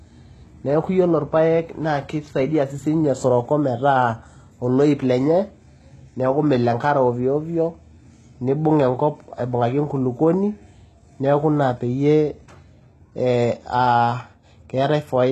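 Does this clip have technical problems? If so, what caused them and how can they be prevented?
Yes. Throughout, sibilants sound gritty and metallic, the likely result of heavy HE-AAC compression at what sounds like about 16 kbps. The treble is rebuilt from copied lower bands, and a spectrogram shows repeated patterns with a hard cutoff at 12.3 kHz. To prevent this, encode at a higher bitrate or use a full-band codec.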